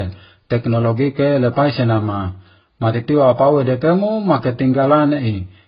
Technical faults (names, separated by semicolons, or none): transcoding between lossy codecs